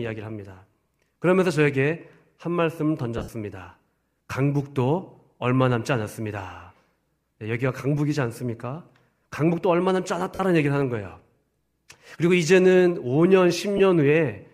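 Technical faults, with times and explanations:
3.18–3.29 s, 10.35–10.40 s, 13.77–13.80 s: lost LE Audio frames. Gaps of 82.5 ms (scattered over 105 ms, longest stretch around 70 ms), 45 ms and 22.5 ms are concealed by repeating the last LC3 spectrum with random signs, so speech briefly smears into noisy grain.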